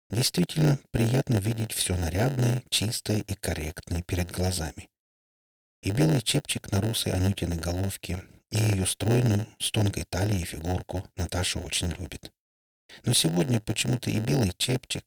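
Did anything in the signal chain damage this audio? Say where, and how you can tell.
Yes. A block size mismatch (padded) at the driver or buffer stage. A buzz at about 92 Hz runs through the whole clip. Each short block is topped up with silence, so gaps recur at that rate. The audio plays at 0.919 speed, at nearly normal pitch.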